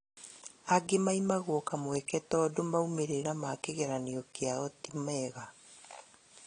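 Speech carries plainly audible damage, likely from AAC compression, throughout: nothing sounds above about 10.1 kHz, sibilants fizz and smear, and the spectrogram shows a hard ceiling, which fits low-bitrate AAC-LC at around 32 kbps.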